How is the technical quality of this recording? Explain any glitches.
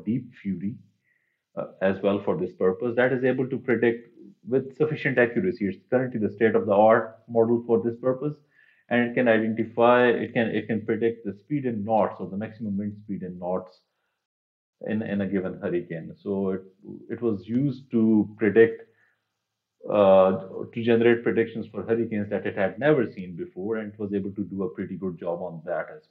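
There is one glitch. A rebuffering stall at 14.26 to 14.73 s: playback ran out of downloaded data and paused, inserting about 0.47 s of silence before the audio resumed exactly where it stopped, with nothing lost.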